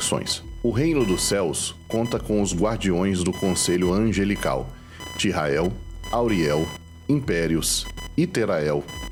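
Computer activity noise runs throughout the audio: a buzzing, chirping pulse train around 1 kHz, roughly 20 dB below the signal, tracking load changes on a shared ground rather than the sound. A spectrogram shows comb-like harmonic lines and bursts unrelated to the content.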